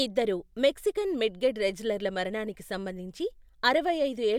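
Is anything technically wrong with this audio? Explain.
No, nothing here sounds technically off, so there's nothing to flag in this speech recording.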